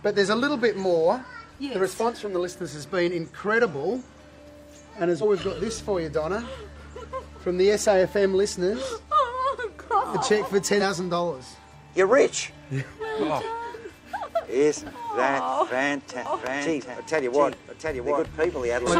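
At 5.18 to 5.23 s and again at 10.77 to 10.82 s, damaged data in a compressed stream breaks the sound for about 40 to 50 ms each time. The decoder misreads corrupted frames and loses sync, giving a brief chirp, click or hole. On a spectrogram each shows as a narrow vertical smear or gap.

From 16.26 s to the end, a doubled audio track appears. A second full-band copy, about 5 dB quieter, runs roughly 0.7 s behind the original, likely from a second capture path or an edit holding two offset copies. It starts abruptly and adds no reverberant decay. The waveform shows overlapping, time-shifted envelopes.

A third burst of stream damage, 18.84 to 18.89 s, falls inside the doubled section.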